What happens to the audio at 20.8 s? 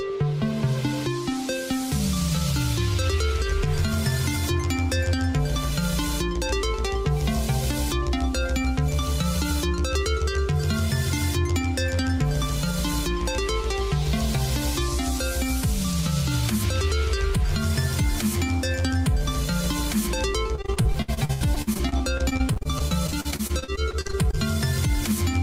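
At 20.8 s the audio is inside a stretch of repeated packet loss, giving a robotic sound from 20.55 s to 24.35 s. Dozens of brief dropouts arrive in quick succession, the longest lasting 79 ms. Each hole is covered by stretching the sound just before it, and the next hole comes soon after. About a quarter of the stretch is patched this way. The result is choppy audio with pieces missing.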